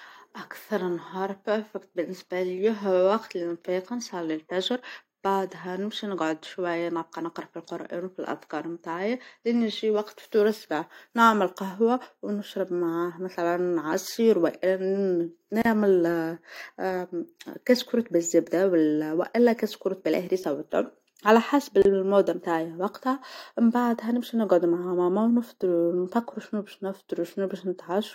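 At 15.62 s the speech drops into a short silence of about 34 ms, then resumes exactly where it left off. This is a gap at a join of encoded pieces. The audio was encoded in separate segments and butted together without trimming, so the encoder's start-up delay and the padded final frame both remain as dead air. The edges are smeared by the codec. The same fault recurs at 21.82 s, a gap of about 30 ms.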